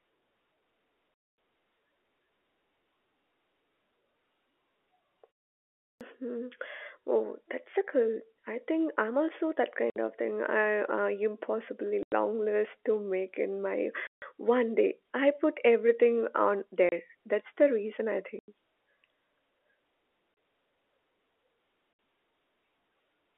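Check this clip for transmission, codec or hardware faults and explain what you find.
Two faults are audible: packet loss filled with silence, and a clipped start after a pause. The narrowband telephone sound fits G.711 coding, with nothing above 3.4 kHz.

Packet loss filled with silence occurs at 1.14, 9.9, 12.03, 14.07, 16.89, 18.39, 20.34 and 21.93 s. Lost packets were replaced by silence. The holes last 30 to 240 ms, all multiples of 30 ms, which fits 30 ms packets. Their edges are hard.

The clipped start after a pause comes at 5.87 s. After a 0.63 s pause, the output device was slow to wake. About 138 ms of onset is swallowed, so speech starts abruptly.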